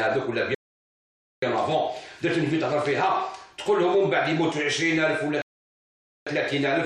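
The sound cuts abruptly to silence twice, from 0.55 to 1.42 s and from 5.42 to 6.27 s, then picks up exactly where it left off. These are rebuffering stalls: playback ran out of downloaded audio and waited, adding about 0.88 s and 0.85 s without losing anything.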